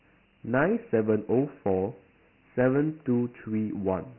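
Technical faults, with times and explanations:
Throughout, Dialogic VOX ADPCM: the speech sounds narrow and muffled, with nothing above about 3.1 kHz, and a heavy gritty hiss rides along with it. That fits 4-bit adaptive coding at 6,000 samples a second, about 24 kbps, whose coarse steps leave heavy quantisation noise.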